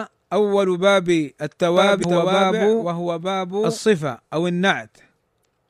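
From 1.77 s to 3.78 s a doubled audio track runs under the speech: a second, full-band copy trails the original by about a second and sits a few decibels lower. It has no reverberant tail or room colouring, and it cuts in and out abruptly at both ends. The likely cause is a second capture of the same signal through a slower path, or an edit that left two copies misaligned.

Within that stretch, from 2.01 s to 2.05 s, damaged data in the compressed stream produces a short glitch. Corrupted or missing bytes cause the decoder to misread frames, lose sync and hunt for the next valid header. The same fault recurs from 5.41 s to 5.45 s, with a similar brief glitch near the end of the clip.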